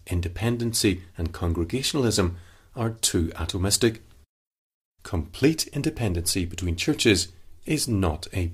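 No technical faults can be heard anywhere in the speech. At no point does anything in the signal stand out as going wrong.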